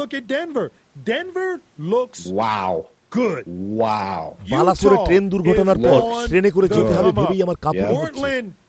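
No technical faults are audible.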